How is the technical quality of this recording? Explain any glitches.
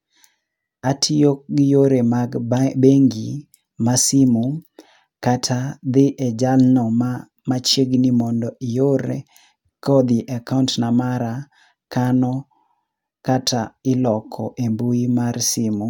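No technical glitches turn up here: the speech signal stays intact throughout, with nothing in it that points to a problem in capture, processing or playback.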